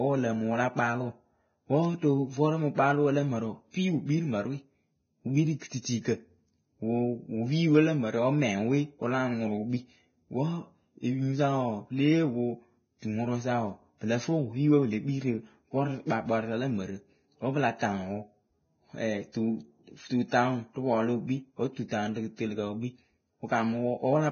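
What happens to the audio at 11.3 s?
At 11.3 s, as throughout, the speech shows likely Vorbis compression at a very low bitrate, around 17 kbps. Everything above 6.5 kHz is gone, and the remaining treble is quantised so coarsely that its detail becomes hiss, making sibilants grainy and onsets blurred.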